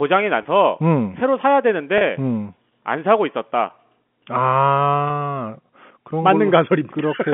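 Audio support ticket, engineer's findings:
Packet loss with pitch repetition at 0.43 s, 1.98 s and 5.08 s. Brief held, buzzy smear in the sound, about 20 ms, 30 ms and 20 ms long, which fits two, three and two lost 10 ms packets. Probable component: network path into receiver jitter buffer, with concealment repeating the last pitch period. Spectrogram: harmonics frozen flat across each gap. Waveform: identical repeated cycles, not silence. Line band 150 Hz to 3.4 kHz from the G.711 A-law leg.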